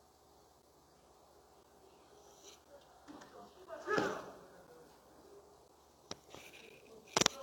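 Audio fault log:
0.62, 1.63, 2.64, 3.66, 4.67, 5.68 and 6.69 s: gap between chunks. The sound stops dead for about 12 ms, then resumes exactly where it left off. Nothing is missing. The audio is simply paused at each join. The holes arrive once per second, matching 1.0 s chunks that are played back to back with a short silence between them. Each one is a small, regular dropout.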